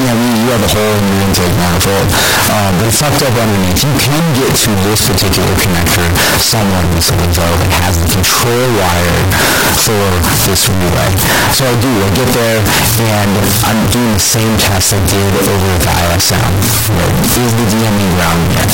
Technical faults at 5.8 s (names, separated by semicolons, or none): float read as integer